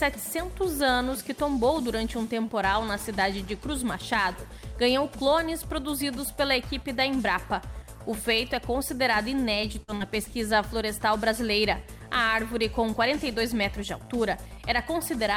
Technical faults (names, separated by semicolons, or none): repeated packet loss (robotic sound)